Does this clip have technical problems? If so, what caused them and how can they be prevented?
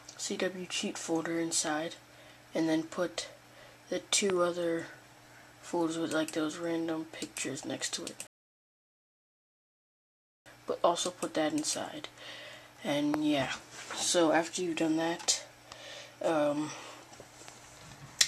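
Yes. Loud pops occur at 1.67, 4.30, 13.14 and 17.48 s, each a single sharp click standing well above the sound, by roughly 10 to 20 dB, while the audio continues beneath. They are likely voltage pulses from a switch, connector, static discharge or driver glitch entering the chain. Securing cables, grounding properly and updating audio drivers prevents them.

A rebuffering stall runs from 8.27 to 10.46 s. Playback ran dry, fell silent, then resumed exactly where it stopped, losing nothing but adding 2.19 s. A larger playback buffer or steadier network connection prevents it.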